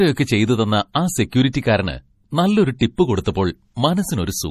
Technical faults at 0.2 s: MP3 compression

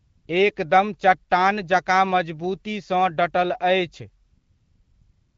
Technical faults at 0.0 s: AMR comfort noise

